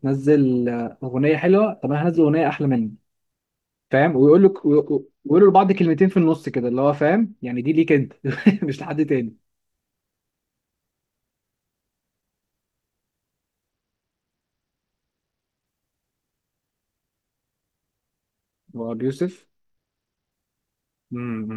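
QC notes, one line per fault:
4.49–7.44 s, 13.70–15.66 s and 19.21–20.31 s, Bluetooth SBC bit pool drop: the speech goes dull and picks up a gritty, grainy edge in each stretch, then snaps back to full brightness. It sounds like the link got congested and the phone cut the bit pool hard, fitting a fall from around 28 to 12, roughly 96 kbps. That starves the top sub-bands of bits, so the treble goes, and what remains gets coarsely quantised.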